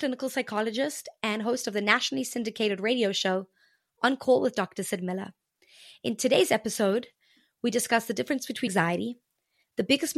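At 8.66 to 8.68 s, right after "we discuss the difference", the speech is interrupted by damaged data in the compressed stream. For about 20 ms the decoder reads corrupted frame data, turns it into the wrong sound, then loses sync and hunts for the next valid frame header. The result is a short glitch.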